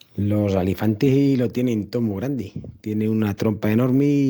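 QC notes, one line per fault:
No faults found on this speech clip.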